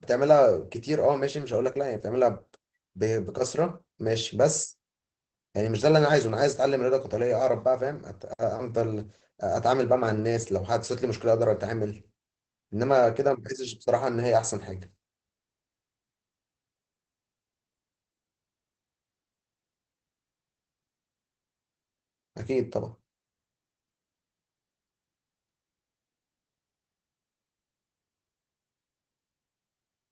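Across the whole recording the speech sounds muffled, slightly hoarse and faintly robotic, with nothing above about 8 kHz. That is Opus voice compression in its SILK mode, coding the speech coarsely in a wideband channel, which fits a bitrate of about 12 kbps.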